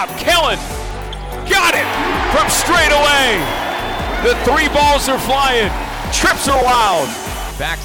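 From 6.24 s to 7.75 s you get periodic USB or driver dropouts: something in the background is stalling the bus or driver every 0.063 s, about sixteen times a second. Each time, roughly a millisecond of audio just gets skipped rather than filled in, so the waveform jumps. That's around thirty tiny splices, and they come across as a steady, even ticking riding on the signal until near the end.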